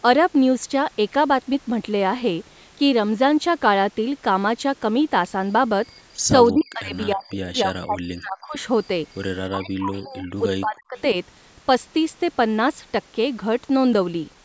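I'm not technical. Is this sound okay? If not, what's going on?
No. At 6.48 to 6.64 s and again at 10.97 to 11.01 s, a faint delayed copy of the voice slips in. That's an echo leak, likely an echo canceller missing some loudspeaker sound, which returns about 0.31 s late.

From 6.53 to 8.55 s, 9.51 to 10.44 s and 10.61 to 10.98 s, the voice drops sharply in pieces. That's speech suppressed in double talk, likely because both sides spoke at once.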